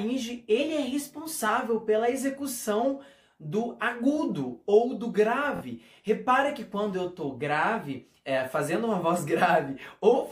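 From 0.58 s to 1.49 s the sound runs about 5.8% fast and sits roughly 97 cents sharp, close to a full semitone. This is likely a drift correction step, where clock-matching software briefly changed the playback rate in one jump to rebalance its buffer.

At 5.56 s to 5.61 s a Bluetooth stutter produces a brief buzzing repeat of the last short slice of audio. The sound then picks up about 46 ms later, as though it had kept playing. This fits a couple of late or lost packets being covered by replaying buffered data.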